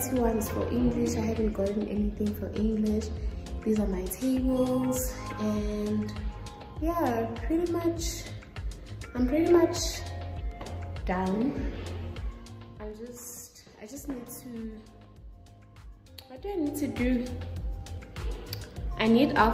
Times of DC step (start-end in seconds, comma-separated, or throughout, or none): none